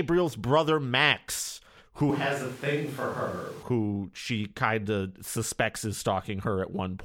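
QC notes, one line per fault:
2.10–3.63 s, switch to a distant microphone: the speech suddenly turns roomy and thin, about 5 dB quieter, with room noise rising to roughly 25 dB below the speech. It snaps back before "who she kind of". The close microphone's signal likely dropped out, leaving a farther one.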